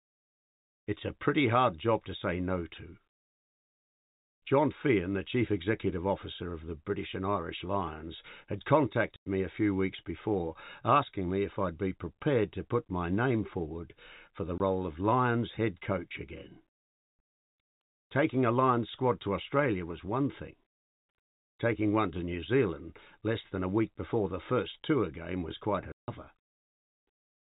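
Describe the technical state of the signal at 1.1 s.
At 1.1 s the speech is intact, carried on the narrow telephone band of G.711 telephone coding with nothing above 4 kHz and no fault at that moment.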